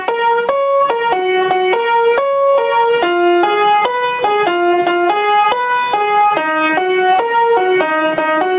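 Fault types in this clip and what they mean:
gain pumping: level swells and ducks by about 5 dB as each loud sound arrives, likely from over-high input gain and a fast limiter; waveform envelope visibly breathes.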